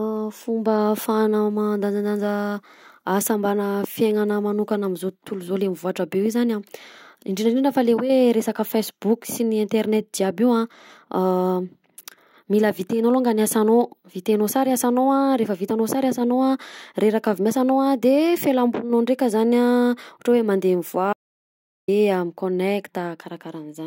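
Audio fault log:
21.13–21.88 s, audio dropout to silence: the speech cuts off abruptly and returns mid-flow after about 0.75 s of silence, with no room tone, likely from a brief input loss. The waveform shows a flat line; the spectrogram shows a blank vertical gap.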